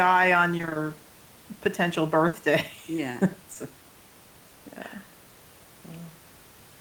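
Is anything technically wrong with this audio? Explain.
Yes. There are three packet-loss faults in this speech, heard over a background of room noise that sits about 26 dB below the voice and belongs to the recording itself.

From 0.57 to 0.77 s there is repeated packet loss, with a robotic sound. Five short holes, none longer than 20 ms, each get patched by extending the preceding sound, so half of this stretch is synthetic. The result is choppy speech with small pieces missing.

From 2.27 to 2.35 s a burst of packet loss removes 60 ms of audio. The receiver carries the last sound forward and fades it out, so a voiced sound turns into a brief held buzz, and then the speech resumes with that section gone.

Between 3.53 and 3.57 s a short concealed packet loss drops 20 ms. The decoder fills it by continuing the prior pitch or noise and then blends back into the real signal. It is heard as a small smear or wobble, and a brief consonant may disappear.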